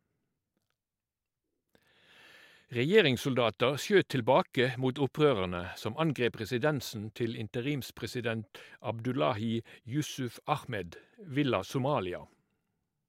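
No technical faults can be heard anywhere in the recording; the signal stays continuous and stable throughout.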